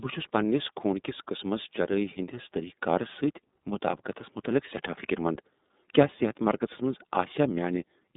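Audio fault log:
throughout, iLBC codec: the speech sits in a narrow phone band, about 200 Hz to 3.7 kHz, with nothing above 3.8 kHz. There's a plainly rough, slightly synthetic edge because each frame's excitation is coded independently, which fits iLBC's 30 ms, 13.33 kbps mode.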